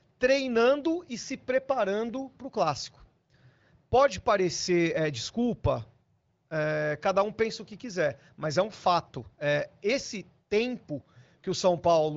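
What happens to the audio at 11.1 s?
Nothing goes wrong at 11.1 s; the speech carries on intact through the AMR wideband (HD Voice) codec, which at about 15.85 kbit/s leaves it clear with only light coding colour.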